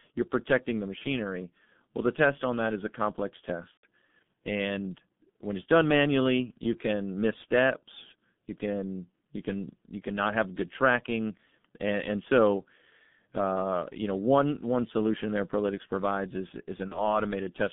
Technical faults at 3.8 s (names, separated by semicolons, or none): G.723.1 codec; VoIP packet loss concealed by the speech codec